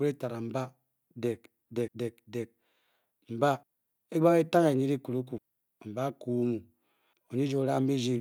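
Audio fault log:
1.88, 3.63, 5.38, 7.13 s: audio missing between chunks. The speech jumps forward at each of these points, with about a third of a second gone and the two sides butted straight together, no gap of silence. It comes back every 1.75 s, which is what you'd hear if the recorder likely works in 2 s chunks and drops a slice while switching from one to the next, so the timeline slips a little each time.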